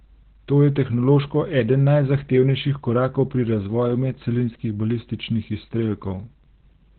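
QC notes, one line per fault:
Throughout: Opus voice compression; coarsely coded excitation leaves speech hoarse and muffled, spectrogram cut flat at 4.3 kHz, which fits narrowband SILK near 8 kbps.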